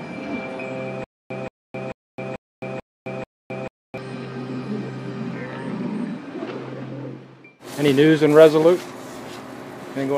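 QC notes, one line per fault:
1.04–3.98 s, stutter with silent gaps: the same short burst of about 176 ms comes back six times, each one followed by around 263 ms of dead digital silence, so it ticks along at a steady 439 ms rhythm. Whatever should have played over those three seconds is simply gone. The cause is likely a stalled player or stream retrying, replaying its last buffered fragment each time before running empty again.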